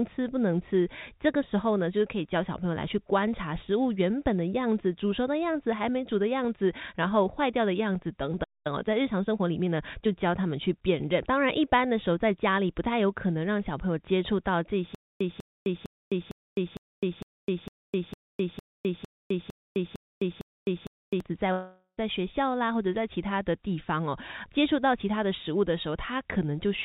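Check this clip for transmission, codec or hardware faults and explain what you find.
Four faults stand out, all in delivery rather than in the codec. The audio has a narrowband call sound with nothing above 4 kHz, which fits G.711 A-law at 64 kbps.

A playback stall occurs from 8.43 to 8.67 s. The speech stops in mid-flow for about 0.21 s, then resumes where it left off. The likely cause is a player that ran out of buffered data, or whose output thread was briefly blocked.

Time-compressed catch-up follows from 8.67 to 10.09 s. The speech runs about 1.15 times fast at normal pitch. The player is clearing the backlog from the stall by cutting out small slices and cross-fading across them.

A stutter with silent gaps runs from 14.95 to 21.20 s. A burst of about 0.2 s repeats 13 times, once every 0.46 s, with about 0.26 s of digital silence after each. The likely cause is a stalled stream replaying its last fragment at each retry. 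The speech due in that span is lost.

A long network dropout spans 21.52 to 21.99 s. About 0.46 s of speech is missing. The receiver extends the last sound as a fading buzz or hiss, then leaves roughly 0.08 s of silence before the speech returns further on. The likely cause is that no packets arrived for that stretch.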